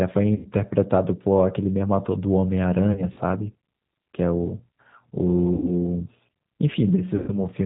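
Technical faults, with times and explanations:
Throughout: G.729 codec. The speech is cut off above 4 kHz and carries a rough, slightly synthetic grain that is plainly audible, consistent with 8 kbit/s G.729A. The decoder rebuilds each 10 ms frame from a vocal-tract filter, a pitch predictor and a few sparse pulses, so fine detail is approximated. Unlike a simple low-pass filter, this adds buzzy, artificial texture within the band.
0.35–0.47 s, 2.92–3.19 s, 5.54–5.70 s, 7.16–7.34 s: VoIP packet loss concealed by the speech codec. About 100, 80, 100 and 120 ms of audio were lost. At 2.92–3.19 s the loss is scattered over about 240 ms in runs of up to 40 ms. The decoder repeats its last pitch and filter at falling gain, so the sound smears into a fading buzz. The loss is not a silent gap or click, and the sound stays weakened briefly after recovery.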